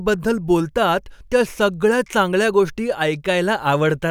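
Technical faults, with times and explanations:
No technical faults can be heard in this recording.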